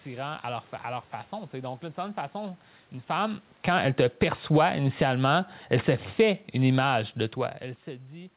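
From 3.52 s, just after "certaine façon une femme", the speech shows automatic gain falling: the gain control pulls its gain down steadily until 7.45 s, for a total drop of about 7 dB. The speech sinks over nearly four seconds, and the room noise underneath sinks with it. The band stops at 4 kHz, consistent with a G.711 call path.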